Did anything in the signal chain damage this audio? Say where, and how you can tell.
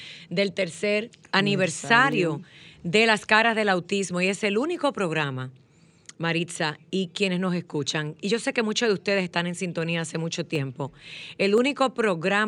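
Yes. Five isolated sharp clicks sit at 0.75, 2.12, 4.76, 10.55 and 11.58 s, each a thin vertical line in the spectrum. These are dropped samples: a fraction of a millisecond goes missing, so the waveform jumps ahead, likely at the driver or buffer stage.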